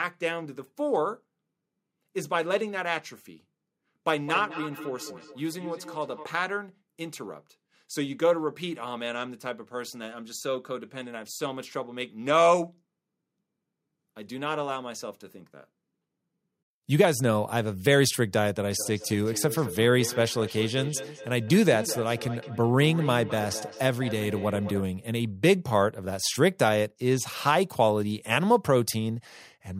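From 4.17 to 6.28 s, and again from 18.76 to 24.86 s, the speech comes back as a ringing repeat roughly a fifth of a second behind, peaking about 13 to 14 dB below the speech. This is feedback echo between two devices: a second device in the room replays the sound into the microphone, and that device's echo canceller cannot remove what another device plays.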